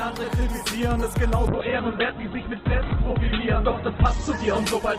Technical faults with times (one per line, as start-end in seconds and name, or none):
1.49-4.98 call bitrate drop